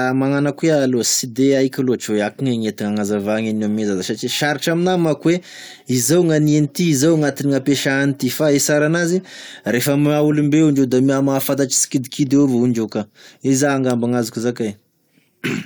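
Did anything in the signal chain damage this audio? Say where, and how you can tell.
No, I can't hear any damage from any stage of the chain in this speech recording.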